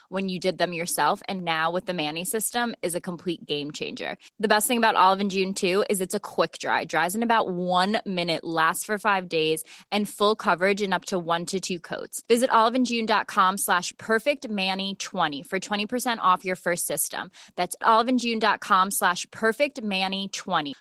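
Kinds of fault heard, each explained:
Opus voice compression: throughout, the speech has a hoarse, slightly robotic grain from coarse linear-prediction coding below 8 kHz, while the band above stays present, consistent with hybrid Opus near 16 kbps; unlike simple low-pass filtering, the highs remain.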